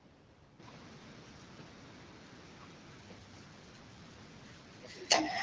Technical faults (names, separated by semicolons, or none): none